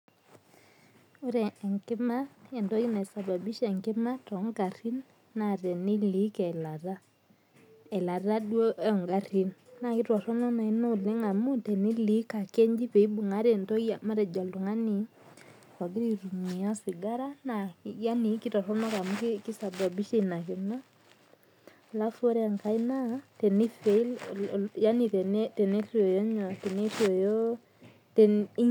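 Listening through this speech recording, nothing stood out as a technical problem at any point.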